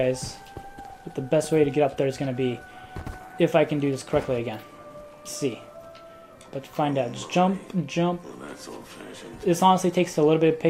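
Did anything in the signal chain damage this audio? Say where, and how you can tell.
Yes, a brief burst of noise blips at 1.45 s is DAB burbling: weak reception let a few bit errors through, corrupting MP2 sub-band data in the codec.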